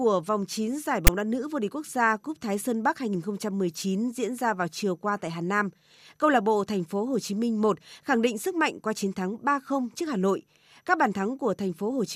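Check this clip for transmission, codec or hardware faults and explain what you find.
One fault turns up in this speech clip: file tags played as audio, at about 1.07 s, just before "đá nữ vô địch". A block of metadata text with zero padding was handed to the decoder and treated as sample data. The character bytes become a loud, one-sided rasp, and the padding drops to dead silence. The result is a hard-edged burst of static, over almost as soon as it starts, that breaks into the speech without any fade.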